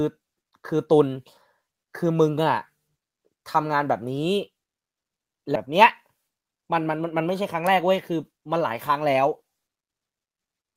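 At 5.55 to 5.57 s a skip ahead jumps straight past about a second of speech with no silence left behind, unlike a dropout, which would leave an audible gap. From 7.55 to 8.77 s a jitter buffer speed-up trims short pitch-period slices, about a tenth of a second in total, so the speech runs at 108% and sounds hurried while its pitch stays unchanged, unlike simply playing the audio faster.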